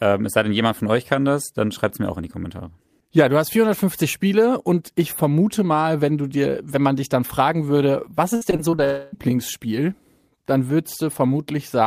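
Right after "dann fragen würde was", from 8.35 to 8.80 s, the speech turns choppy and robotic. This is repeated packet loss. Audio data went missing in several short holes, the longest about 57 ms. Each hole was patched by stretching out the sound just before it. About 140 ms of real speech is gone, and roughly 29% of the stretch is filled-in sound. The quick run of patches gives the buzzy, mechanical texture.

A longer gap follows at 8.84 s and lasts until 9.14 s. About 280 ms of speech never plays. In its place is a continued buzz built from the last sound. It does not fade to silence before the audio resumes. The missing part does not come back. The cause is likely a long network dropout, where no audio reached the receiver for that whole stretch.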